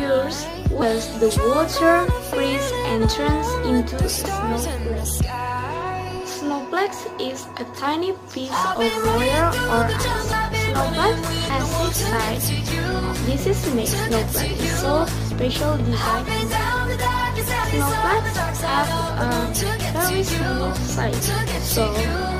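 Compressed frames skipped at 0.81, 10.32, 17.64 and 20.77 s: at each point the audio jumps ahead, losing roughly half a second, a fifth of a second, about 70 ms and about a tenth of a second respectively. Those gaps fit whole multiples of a 26.1 ms frame, dropped because they were missing or rejected as damaged. Since adjacent frames overlap, each join is a brief smeared blip, not a sharp click.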